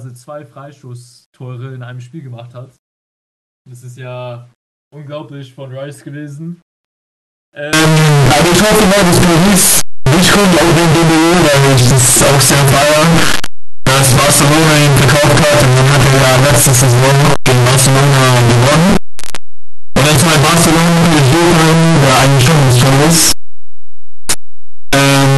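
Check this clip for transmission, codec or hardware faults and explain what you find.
One fault stands out: a signed and unsigned mix-up, heard from 7.73 s to the end. At that point the speech turns into very loud, harsh distortion. Quiet moments are now as loud as the speech itself. The likely cause is 8-bit samples being read with the wrong sign convention. That flips the top bit, so every zero crossing jumps across the full range.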